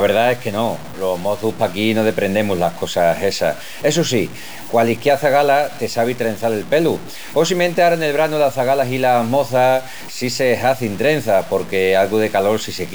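Throughout the speech, the signal was likely truncated to 5 bits with no dither, so the error follows the signal rather than acting as steady noise. The result is grainy, shifting distortion sitting about 20 dB below the speech, and quiet stretches turn gritty or sputter.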